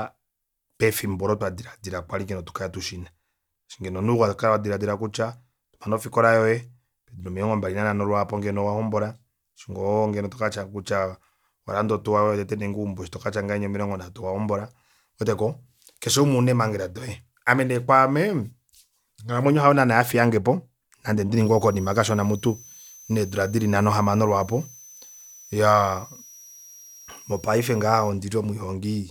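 A switching power supply slipped into an audible burst mode or beat against another supply, leaving a switching supply whistle from 21.34 to 28.10 s: a thin, high tone wandering between about 5.4 kHz and 6.3 kHz, sitting roughly 25 dB under the speech.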